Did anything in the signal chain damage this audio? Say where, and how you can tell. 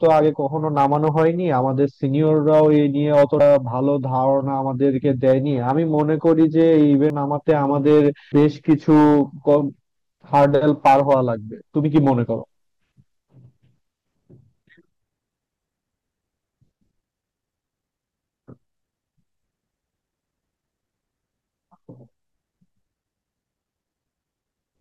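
Yes. Hard clipping sits at the converter or sample-format stage, wherever gain first exceeded full scale, and it runs through the whole clip. The speech is driven about 6 dB past the limit, so around one percent of samples hit the ceiling and are cut flat. Those squared-off peaks add high harmonics, heard as a gritty crackle on the peaks. Because it follows the speech level and never jumps the timeline, it is distinct from the decoder faults below.

Damaged data in a compressed stream belongs to the codec or storage stage. There are two brief glitches, at 3.37 to 3.41 s and at 8.29 to 8.32 s, each about 30 ms long. Corrupt bytes made the decoder misread those frames and hunt for the next valid header, so the output glitches there. These are decode artefacts lasting only a few tens of milliseconds, unlike the splice at 7.10 s.

Audio missing between chunks shows up at 7.10 s. About a tenth of a second of speech vanishes, and the two sides butt together with no silence, so the sound skips ahead abruptly. 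This is likely a recorder or buffer stage working in 10-second chunks and dropping a piece while switching from one to the next. There is no squawk or garbled decode here, which separates it from the compressed-stream damage.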